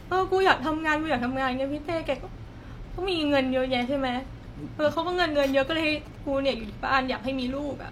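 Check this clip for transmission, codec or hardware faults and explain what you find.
One hardware fault is present: GSM signalling bursts, from 4.97 to 6.16 s in this speech clip. A nearby 2G phone exchanging signalling traffic emits short groups of radio bursts. The audio circuitry rectifies them into a galloping dit-dit-dit of brief buzzes at 217 Hz, sitting roughly 20 dB below the speech. Unlike steady mains hum at 50 or 60 Hz, this interference is intermittent, arrives in clustered bursts and has a higher, rasping 217 Hz buzz.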